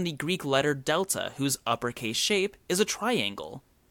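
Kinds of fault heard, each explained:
Nothing here to flag: no technical faults turn up anywhere in this bit of speech.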